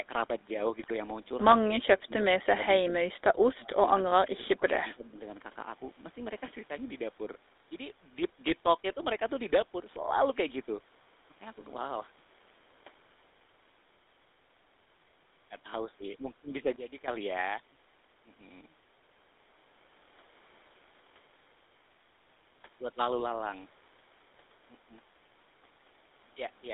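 Speech, heard through the GSM full-rate codec for its whole length. The band is held to roughly 300 Hz to 3.7 kHz. Nothing reaches above that. The voice has the gravelly, buzzy texture of this codec. The excitation is coarse and built from spaced pulses, so fine detail is lost. The damage is plainly audible, and the sound fits the 13 kbps full-rate coder. GSM bit errors hit from 0.80 to 0.93 s. The voice breaks into a brief gargling squawk. Corrupted filter, pitch or gain values were decoded as if valid. That bent the spectrum and level frame by frame. The burst fits around six damaged frames. Next comes speech suppressed in double talk, from 1.62 to 2.93 s. The voice dips and cuts out in pieces, about 1 s in total. The deepest drop is about 30 dB. The likely cause is an echo canceller that heard both sides at once and turned the talker down with the echo. The same suppression returns from 3.47 to 5.16 s. 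Here it is shallower, about 20 dB at worst. Around 1.5 s of speech is affected, thinned and broken. A sudden gain jump occurs between 16.76 and 17.08 s. Speech and background noise step down together by about 14 dB. The change is abrupt, with no fade. A digital gain setting applied at once, without a ramp, is the likely cause.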